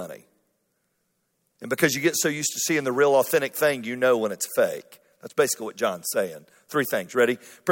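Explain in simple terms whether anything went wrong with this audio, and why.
Nothing went wrong with this speech recording. No moment in it stands out as a fault, so there are no times to point to.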